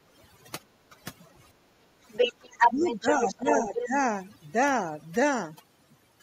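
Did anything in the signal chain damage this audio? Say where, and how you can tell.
Yes. Overdone noise removal in the call processing runs throughout. The background drops and breaks up into twinkling specks.

Speech is suppressed in double talk at 0.9 s, dipping about 10 dB. From 2.39 to 3.95 s it dips about 15 dB, likely because the echo canceller ducked both talkers.

The other side's voice leaks through, likely as residual loudspeaker echo. It runs from 2.13 to 3.06 s, about 5 dB above the speech, and again at 3.26–3.35 s and 3.51–3.86 s, quieter.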